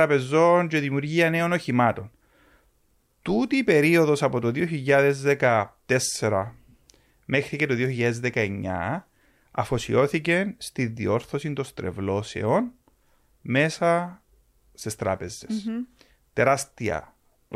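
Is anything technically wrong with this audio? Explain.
No, the speech signal shows no technical faults that a listener would notice.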